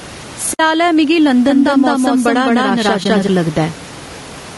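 Gain pumping runs through the whole speech clip: gain likely set far too high, so a fast limiter pulls it down on each loud syllable, letting the background (the room noise, about 30 dB below the speech) swell by around 10 dB in the gaps.

Low-delay AAC compression is also present throughout. Its short frames likely come from AAC-ELD, and they resolve harmonics poorly. The speech sounds rough and grainy, with noise between harmonics, which fits roughly 32 kbps.

AAC frame loss with muting occurs at 0.53–0.60 s. The decoder zeroed what points to three lost frames, about 60 ms, and the overlapping windows fade the sound into a soft-edged hole.

A doubled audio track appears from 1.49 to 3.27 s. A full-band copy at about equal level follows roughly 200 ms behind, dry and without decay, and starts and stops abruptly, likely from a second, slower capture path.

AAC frame loss with muting returns at 3.03–3.06 s. 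This time a single frame of about 20 ms is muted and smoothly faded out and back in.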